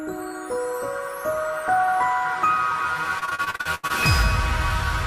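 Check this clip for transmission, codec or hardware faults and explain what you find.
One transmission fault appears: repeated packet loss (robotic sound) from 3.19 to 3.91 s. Audio data kept going missing across this stretch, and each hole was patched by extending the last received sound, so nearly half of the stretch is concealment. The gaps come in quick succession, the longest about 82 ms, giving a choppy, robotic texture with pieces absent. A single lost packet would cause one brief glitch; here the dropouts keep recurring within the stretch.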